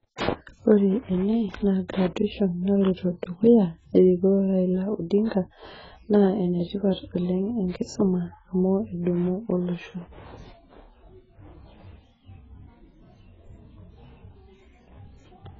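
Speech runs the full clip with heavy AAC compression damage throughout: the voice is dull and smeared, and sibilants and held vowels carry a warbling, fizzy texture. Nothing sounds above 7.6 kHz, so a spectrogram would show a hard, flat ceiling there, with patchy holes and blotchy noise-filled bands beneath it. The likely cause is AAC-LC encoding starved of bits, which fits a bitrate around 12 kbps, forcing the encoder to lower its cut-off and discard or substitute detail.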